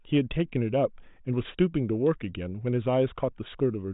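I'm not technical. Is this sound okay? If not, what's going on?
Yes, nothing in this speech stood out as a problem when I listened to it.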